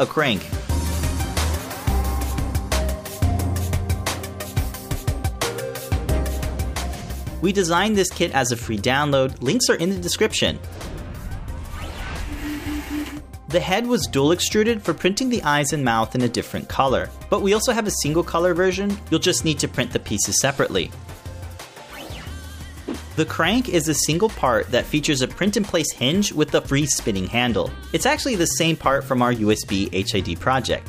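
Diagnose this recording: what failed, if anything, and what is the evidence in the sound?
Nothing in the chain appears to have failed here, as no stage from the wiring through to playback leaves any audible trace of trouble in this recording.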